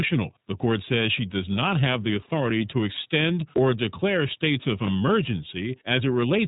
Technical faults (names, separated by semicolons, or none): iLBC codec; chunks out of order